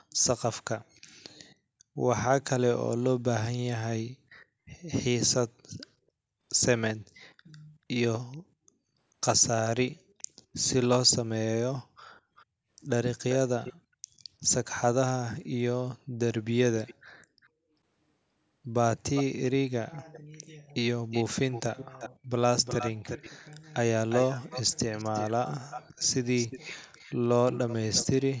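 Echo leak at 8.32–8.37, 9.68–10.23, 12.36–12.45, 13.21–13.73, 16.86–17.49, 19.03–20.2, 21.11–22.1 and 22.64–28.06 s: a delayed copy of the speech, lagging 437, then 391, then 356 ms. It grows from barely audible to fairly strong, likely loudspeaker pickup the echo canceller missed. The spectrogram shows time-shifted duplicates of the speech harmonics.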